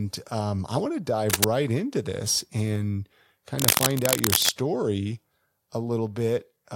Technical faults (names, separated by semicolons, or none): cable scratch noise